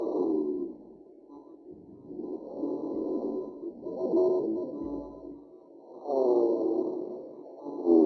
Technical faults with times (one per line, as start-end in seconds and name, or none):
none